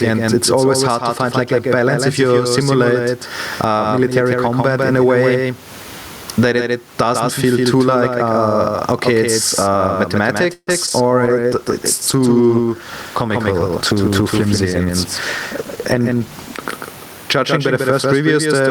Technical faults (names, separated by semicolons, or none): doubled audio track; gain pumping; repeated packet loss (robotic sound); call bitrate drop; jitter buffer speed-up